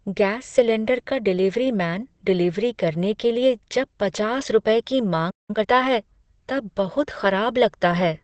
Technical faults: Opus compression; playback stall; time-compressed catch-up

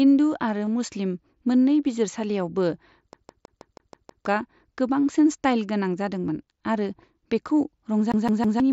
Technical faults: concealed Bluetooth headset packet loss; CD stuck on one turn

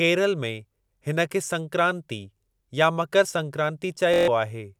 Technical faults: Bluetooth stutter

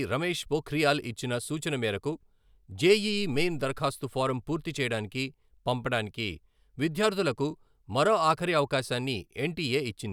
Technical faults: none

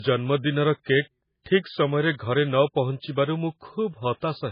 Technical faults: low-bitrate audio saved at a high bitrate

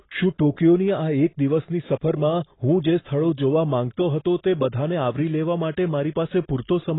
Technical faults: AAC compression

